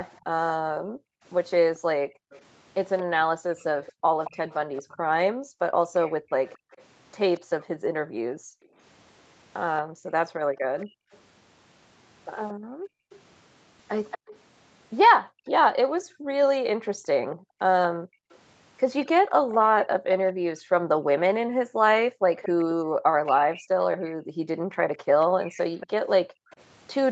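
Echo leak runs from 0.0 to 0.21 s, 1.76 to 8.66 s, 10.79 to 11.18 s, 13.1 to 14.36 s, 17.31 to 20.33 s and 22.36 to 27.1 s. A copy of the speech trails it by about 228 ms, faint in the short stretches and more noticeable in the longer ones. The likely cause is a far-end loudspeaker whose echo canceller let part of its microphone pickup return down the line.

Background gated by the echo canceller spans 0.65 to 13.1 s and 15.2 s to the end. The canceller clamps the microphone while the loudspeaker plays, so the room tone dips by up to about 40 dB and then recovers. Across the first span the drops add up to about five seconds.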